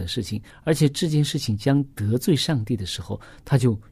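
No technical faults are audible.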